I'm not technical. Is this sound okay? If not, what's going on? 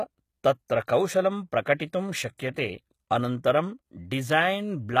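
No. The speech sounds gritty and a bit lispy on s sounds, likely from HE-AAC compression, which fakes the treble by copying lower sound upward. There's also pre-echo, a brief hiss just before sharp sounds at 0.68, 1.65, 1.78, 2.38 and 2.54 to 2.56 seconds, softening their attacks.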